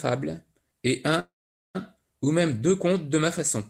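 At 1.19 s the speech stops and the last sound carries on briefly as a decaying buzz or hiss, then drops to silence for about 0.44 s before the talker resumes at 1.77 s with "ou même deux contes". This is a call audio freeze, likely caused by packets stalling in transit until the jitter buffer ran dry. Resumption picks up exactly where it halted, so nothing is lost; instead roughly 0.55 s of filler is inserted and everything afterwards arrives that much later.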